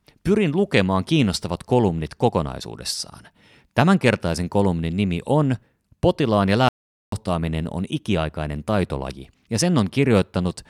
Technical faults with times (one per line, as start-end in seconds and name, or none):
6.69-7.12 audio dropout to silence